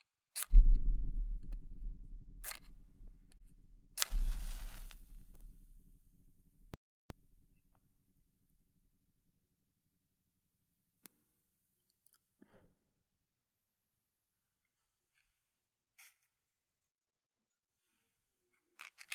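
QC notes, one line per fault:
3.38 to 3.43 s, short stall from a late packet: a packet arrived about 20 ms late, so the receiver held the last sound for 20 ms and resumed from the same point, nothing lost. The waveform shows a brief repeated stretch; the spectrogram shows smeared, frozen bands.
6.74 to 7.10 s, playback stall: output drops to silence for about 364 ms mid-flow before sound resumes, likely because the player ran out of data or its thread was blocked. The waveform shows a flat gap; the spectrogram shows a clean vertical blank column.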